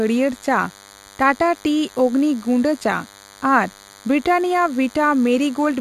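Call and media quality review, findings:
DECT cordless phone buzz, entire clip. Thin steady buzz, roughly 25 dB below speech. Nearby DECT handset or base bursting every 10 ms, rectified in the audio circuit. Spectrogram: 100 Hz harmonic comb, unbroken through pauses.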